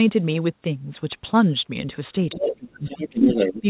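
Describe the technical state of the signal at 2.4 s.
At 2.4 s, a brief scrap of the other side's voice leaking through runs from 2.32 to 2.43 s, roughly 10 dB below the talker. It is likely loudspeaker echo that the canceller failed to remove. Unlike crosstalk or a second person in the room, it is a short fragment carrying the same 4 kHz band limit as the rest of the call audio, which fits a G.711 mu-law path.

Overlapping it, speech is suppressed in double talk from 2.35 to 3.28 s. The talker's level drops in pieces, at worst by around 25 dB, over about 0.7 s in total, likely because the echo canceller turned both sides down while they overlapped. This is uneven gating tied to the echo, not a steady fade or a dropout.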